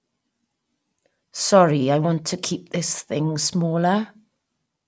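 No dropouts, clicks, distortion or other technical faults are audible anywhere in the speech.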